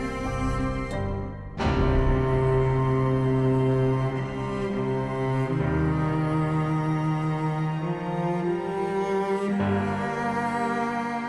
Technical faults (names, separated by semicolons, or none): none